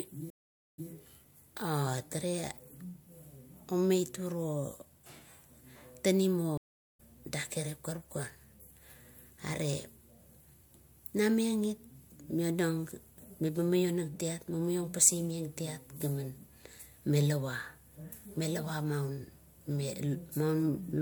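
At 0.30 s there's a stream reconnect: about 0.42 s of dead air, then a fresh decoder picks up 157 ms earlier, so a bit repeats. Another reconnect at 6.57 s leaves 0.36 s of silence and jumps ahead roughly 0.3 s.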